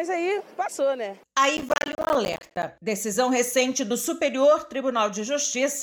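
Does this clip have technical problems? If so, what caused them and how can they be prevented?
Yes. Processor overload crackle runs from 1.57 to 2.63 s. The processor kept missing its deadlines for about 10 ms buffers, dozens of times over that stretch. Each miss left a brief hard-edged silent gap, and together they tear at the sound. Reducing processing load or raising buffer size prevents this.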